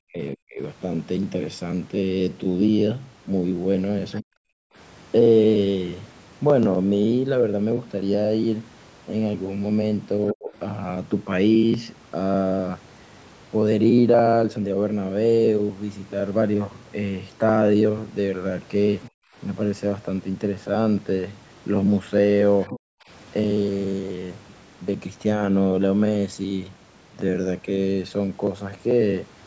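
Speech suppressed in double talk cuts into this speech recording at 0.04 to 0.59 s, 4.21 to 4.28 s, 10.33 to 10.52 s and 22.70 to 22.76 s. In those windows the talker's level falls sharply, by as much as about 40 dB in the first three and only about 10 dB in the last. The likely cause is an echo canceller that heard both ends active at once, could not tell the near voice from loudspeaker echo, and pulled the whole signal down.

Other side's voice leaking through appears as brief, faint second-voice fragments at 4.16 to 4.20 s, 10.27 to 10.33 s, 19.02 to 19.09 s and 22.61 to 22.79 s. They sit about 25 dB below the talker in the first two, about 20 dB at 19 s and about 15 dB at 22.6 s. They most likely come from loudspeaker playback that the canceller failed to fully subtract from the microphone. Three of these scraps sit right against the suppression dips, which fits that picture.

Background gated by the echo canceller shows up as the room tone dropping out at 4.56 to 4.75 s and 19.10 to 19.36 s, by about 40 dB each time, and more lightly at 23.04 to 23.08 s, by about 15 dB. 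Here the canceller clamped the microphone while the far end was playing, then released it. The call's microphone processing is audible in the band limit, with nothing above 8 kHz.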